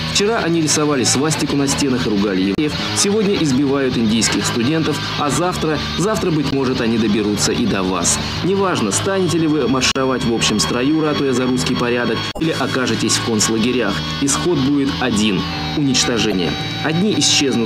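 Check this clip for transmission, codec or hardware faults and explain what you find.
One kind of fault recurs: damaged data in a compressed stream, at 2.55–2.59, 6.49–6.55, 9.92–9.98, 12.30–12.42 and 16.29–16.34 s. Corrupted bytes make the decoder misread frames, lose sync and hunt for the next valid header. Each event is a brief chirp, squawk, click or short hole of roughly 45 to 115 ms cutting across the sound.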